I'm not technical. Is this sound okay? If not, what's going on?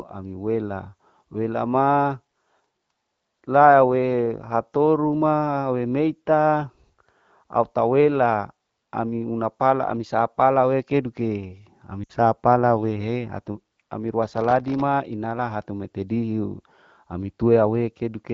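No. At about 12.04 s the voice smears and briefly fades out for about 60 ms, then returns slightly weak. These are lost AMR speech frames: a radio error spoiled roughly three short chunks of the phone call's HD Voice signal, so the decoder stretched the last good sound and faded it.

From 14.38 to 14.81 s a gritty crackle rides on the voice. This is processor overload crackle: the device was too busy to deliver dozens of tiny audio pieces on time, each under a millisecond long, and every miss left a hard-edged gap of silence.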